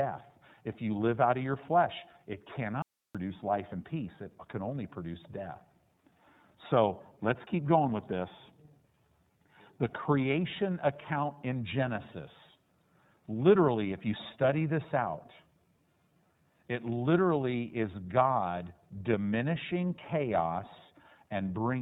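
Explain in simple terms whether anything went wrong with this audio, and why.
Yes, two things went wrong. Throughout, the speech has the iLBC codec sound of an internet phone call: nothing above about 3.8 kHz gets through, so it sounds muffled, and it is slightly rough and synthetic. A plain treble cut would sound dull but smooth. The graininess comes from packing each 30 ms slice separately.

There is also an audio dropout to a faint residue from 2.82 to 3.15 s, right after "of your flesh it" and before "life and peace it". The speech vanishes for about a third of a second, leaving only faint hiss. A natural pause or fade would ease in, but this cut is abrupt. The likely cause is a brief loss of signal while the line stayed open.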